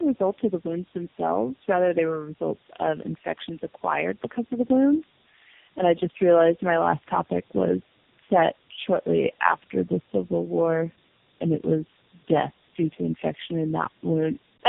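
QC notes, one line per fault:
throughout: tandem speech coding. Speech was decoded and re-coded across links, roughly four codecs deep, compounding damage, so it sounds rough, muffled and warbly, with nothing above 3.7 kHz.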